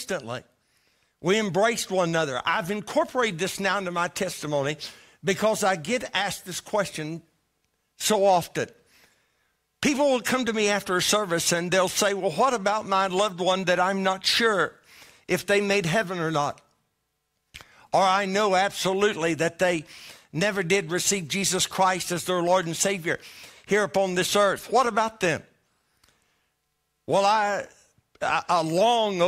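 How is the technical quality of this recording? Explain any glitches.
Nothing here needs explaining, since no glitches turn up anywhere in the recording.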